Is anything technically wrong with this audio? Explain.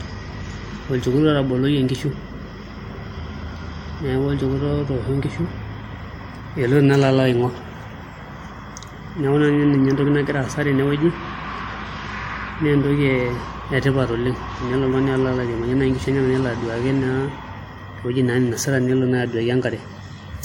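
Yes. Throughout the speech there are signs of transcoding between lossy codecs. Nothing is present above 16.6 kHz, and the speech carries two overlapping layers of coding artefacts. The likely cause is an MP3 encode at a low rate, consistent with about 64 kbit/s, later re-encoded to WMA at around 96 kbit/s. The second encoder spends bits reproducing the first one's errors and adds its own, so the artefacts of each are heard at once.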